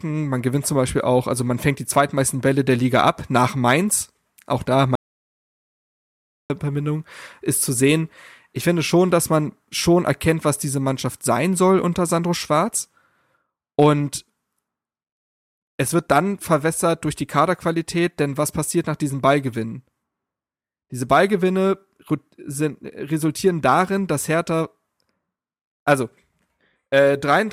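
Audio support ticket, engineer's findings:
Audio dropout to silence, 4.95 s to 6.50 s. Speech cuts off mid-flow and returns abruptly about 1.5 s later. The gap is silent, with no room tone or noise floor. Probable component: capture input path, likely a momentary device disconnect, link failure or mute, while the recorder kept writing silence. Speech in that span is unrecoverable.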